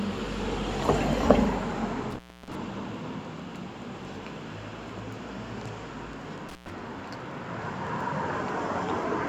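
At 2.10 s there's an intermittent contact fault: a loose plug or cable briefly loses connection, so the sound drops out with a crackle at each edge, leaving only faint hiss until the fault ends around 2.55 s. The line sits open for about 335 ms there. It happens again from 6.49 to 6.72 s, a shorter open stretch of about 109 ms with the same crackly edges and hiss in the gap.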